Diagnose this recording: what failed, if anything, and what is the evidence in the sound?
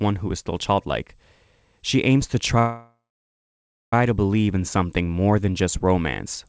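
Call audio freeze from 2.59 to 3.93 s, likely delayed packets draining the jitter buffer: a fading buzz, a 0.96 s blank spectrogram stretch, then the sound resumes with nothing missing.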